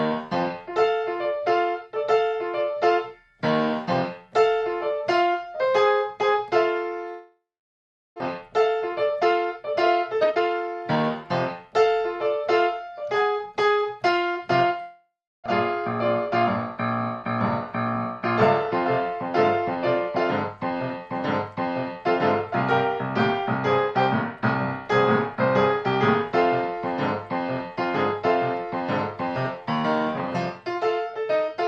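At 7.09 s the audio breaks into a decaying buzz that fades to silence for about 720 ms before sound resumes at 8.22 s. This is the signature of a long network dropout, likely caused by packets failing to arrive: the receiver extended the last sound for about 1.1 s in total, and 600 ms of the audio was never played. A second, shorter long network dropout runs from 14.81 to 15.48 s, with about 0.65 s of concealment, 310 ms of it near-silent, and again 600 ms lost. Straight after the first gap, from 8.41 to 11.25 s, the audio plays about 16% fast while holding its pitch and sounds hurried. This is a jitter buffer speed-up. Once the delayed audio arrived, the buffer was holding roughly half a second more than its target, so the receiver repeatedly cut pitch-period-sized pieces to remove about half a second and bring the delay back down.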